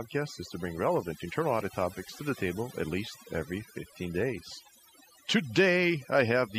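Overdone noise removal runs through the whole speech clip. The noise reduction was set too aggressively, cutting individual frequency bands whenever they sat near the estimated noise floor, taking quiet speech detail with them. Background becomes near-silence with twinkling specks.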